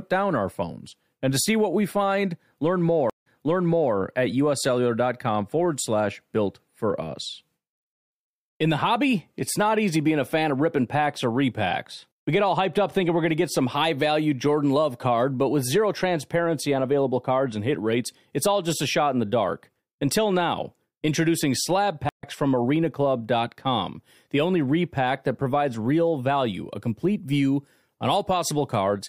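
Two stream reconnects in this speech. At 3.10 s the audio drops out for 132 ms, then a fresh decoder picks up 705 ms earlier, so you hear a short stretch repeated. At 22.09 s there's a 104 ms gap, and it resumes roughly a tenth of a second later, skipping a sliver of speech.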